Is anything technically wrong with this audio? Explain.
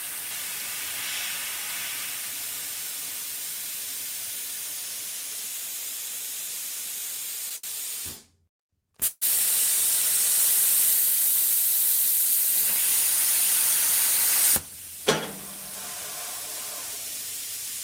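Yes. At 7.57 to 7.65 s the sound is held on for about 68 ms with a slight buzz or dip, then carries on from the same place: a short stall from a late packet. A packet arrived after it was due, the jitter buffer ran empty, and the receiver stretched the last sound until it came, so nothing is lost but the audio now runs 68 ms late.

From 9.07 to 9.23 s the sound stops and is continued as a buzz or hiss that fades, ending in about 30 ms of silence, before the audio resumes where it left off. This call audio freeze, about 144 ms in all, was likely caused by packets held up in transit emptying the jitter buffer, adding a gap without removing anything.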